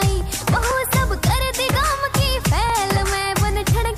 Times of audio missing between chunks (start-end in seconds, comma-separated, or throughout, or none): 0.71, 2.70